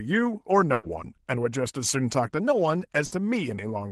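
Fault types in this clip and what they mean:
Burst of packet loss: consecutive packets were lost, so the receiver stretched and faded the preceding sound for 100 ms and 60 ms, skipping the audio between.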